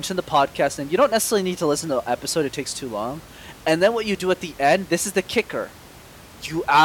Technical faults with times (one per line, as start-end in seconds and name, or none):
none